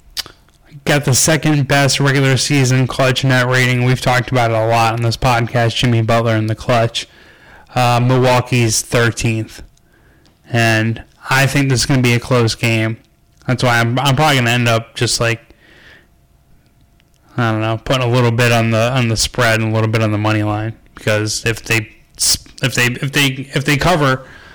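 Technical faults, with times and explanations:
Throughout, hard clipping: every loud stretch of the speech carries a harsh, buzzing fuzz. The signal is driven about 18 dB past what the stage can pass, so peaks are sliced flat on roughly one sample in seven, spraying harmonics high up the spectrum.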